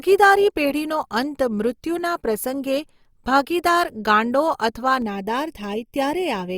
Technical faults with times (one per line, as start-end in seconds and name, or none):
5.02-6.57 channel delay (comb filtering)